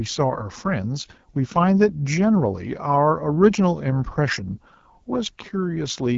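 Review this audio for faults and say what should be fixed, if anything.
The whole clip carries AMR wideband (HD Voice) codec damage: the speech sounds rough and raspy, and nothing is left above 7.5 kHz. That fits a low rate like 8.85 kbit/s, where the pulse-driven model runs out of bits. To avoid it, record or transfer at 12.65 kbit/s or higher, or skip the phone codec path entirely.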